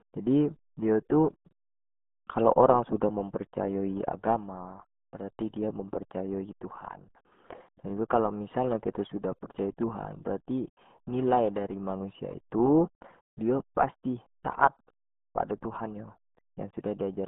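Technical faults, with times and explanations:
Throughout, RealAudio 14.4 codec: the speech sits in a narrow band of about 150 Hz to 3.5 kHz, with nothing above 3.8 kHz, and sounds muffled and gargly. That heavy damage is typical of very low-rate coding, consistent with an 8 kbit/s stream.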